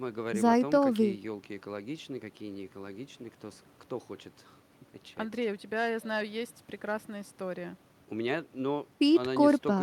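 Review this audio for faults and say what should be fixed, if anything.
Nothing in this recording needs fixing. No fault can be heard anywhere in the speech, so no correction is called for.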